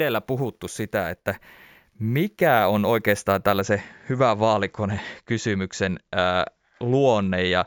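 From 0 to 3.61 s, before "hyvä vaalikone kysymyksen", imaging from sample-and-hold upsampling adds a metallic fizz about 20 dB below the speech. Audio at 16 kHz was raised to 48 kHz by repeating samples, so the spectrogram shows a mirrored copy in 8–16 kHz moving against the pitch, and the waveform shows small steps.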